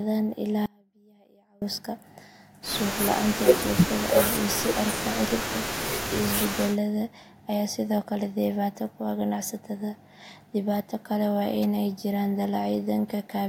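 An audio dropout to a faint residue runs from 0.66 to 1.62 s, losing just under a second of the speech. The voice cuts out abruptly mid-flow rather than pausing or fading. It leaves only faint sound, roughly 35 dB below the signal's normal level, before snapping back. That residue suggests the wanted feed was likely interrupted while the path after the break stayed live and kept passing a trace of sound.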